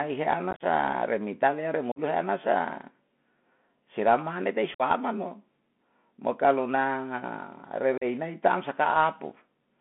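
Throughout, the speech carries Bluetooth CVSD headset codec damage: a 64 kbps one-bit delta coder confined to roughly 200 Hz–3.4 kHz, giving granular hiss and scratchy sibilants. Unconcealed Bluetooth headset packet loss punches abrupt holes where several packets vanished: 0.51–0.63 s before "ren ni taneya ren" (60 ms scattered), 1.92–1.99 s after it (45 ms), 4.74–4.82 s (52.5 ms), and 7.98–8.04 s before "nai ta am" (37.5 ms).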